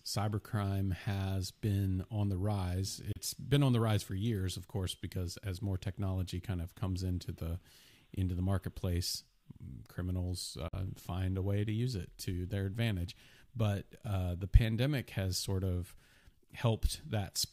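Speech with two Bluetooth dropouts: sharp silent holes at 3.12–3.17 s, right after "been on the rise", and at 10.68–10.75 s, just before "find a way to". These are likely caused by radio packets arriving too late and being discarded. On the waveform, each is a flat, abrupt gap. On a spectrogram, each is a blank vertical stripe across all frequencies, and the speech resumes as though it had kept playing.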